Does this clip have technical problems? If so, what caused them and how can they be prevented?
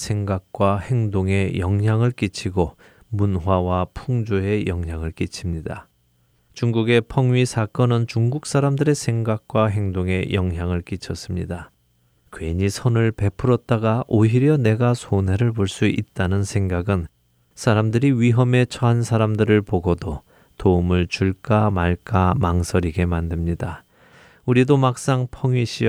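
No, nothing goes wrong anywhere in this recording.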